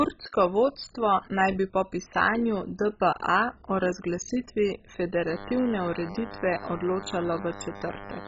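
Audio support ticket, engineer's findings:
MP2 compression, full length of speech: dull, gurgling granular distortion, nothing above 7.5 kHz. Likely MPEG Layer II at a very low rate, fits around 16 kbps. Upper sub-bands starved of bits switch off and flicker; survivors coarsely quantised. Unlike plain low-pass filtering, the band loss is unstable and the grit is codec-like, not smooth.

DECT cordless phone buzz, 5.27 s to 8.27 s (clip end): thin steady buzz at 100 Hz, harmonic-rich, about 15 dB below the speech. Nearby handset or base sends a radio burst every 10 ms, rectified in the audio circuit. Unlike mains hum: onset mid-clip, edgy pulse-train timbre rather than smooth tone.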